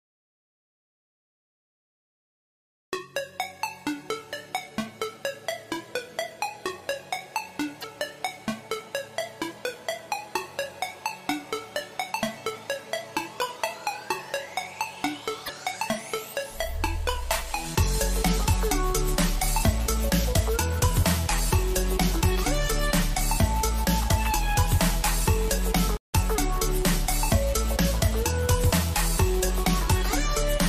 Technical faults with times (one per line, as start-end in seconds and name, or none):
7.80-7.84 broken MP3 bit reservoir
15.45-15.50 broken MP3 bit reservoir
25.97-26.14 playback stall